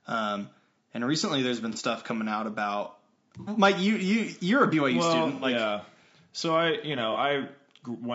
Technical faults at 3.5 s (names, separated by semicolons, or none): low-delay AAC compression; AAC frame loss with concealment